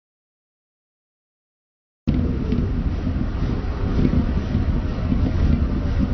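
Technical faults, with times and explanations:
0.00–2.08 s, audio dropout to silence: the clip opens in dead digital silence with no room tone at all, already under way from the first sample, until the sound enters abruptly at 2.08 s. The likely cause is lost input, with the recorder writing zeros meanwhile.
Throughout, AAC compression: the sound is dull and smeared, with nothing above 6 kHz and a plainly audible warbling, fizzy texture on sustained parts. This is likely AAC-LC coding at a low bitrate, consistent with about 32 kbps, lowering the cut-off and thinning the spectrum.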